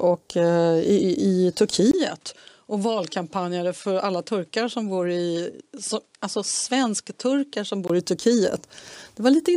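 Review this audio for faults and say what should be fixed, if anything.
From 1.91 s to 7.90 s the speech drops a few decibels and loses its top end, with nothing above 11.4 kHz, and a faint new noise floor appears far below the speech. A gap of about 20 ms marks the first transition. This is likely an input switched to a poorer device, where the recording path moved to a narrower-band microphone with its own gain and self-noise and then switched back at 7.90 s. Prevention: lock the capture device for the session and disable automatic input switching or headset call-profile handover.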